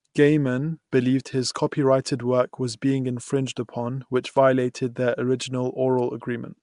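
Speech, carried throughout by Nellymoser compression, likely from the Nellymoser Asao codec used for Flash microphone audio, at a rate the sound points to as about 44 kbps. Its fixed two bits per sample starve the weak bands, which are then filled with noise. The result is a plainly audible rough, hissy halo and a smeared, underwater quality, with nothing above 10.6 kHz. At 0.91 s there is a pre-echo just before "believed his copyrighted work". Quantisation noise sized for that sharp onset is spread back across its block, so an 11 ms hiss comes in ahead of the attack and leaves the onset soft and smeared.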